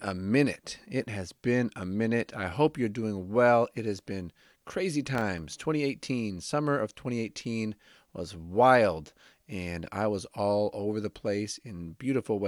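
Right after "has been crazy", from 5.15 to 5.61 s, a burst of processor overload crackle tears across the speech. The processor kept missing its deadlines for very short audio buffers, around a millisecond and a half each, with about ten misses scattered through that stretch. Each missed buffer became a brief silent gap with abrupt edges, heard as gritty crackle. On the waveform these are tiny near-silent dropouts, and on a spectrogram they appear as thin vertical broadband streaks.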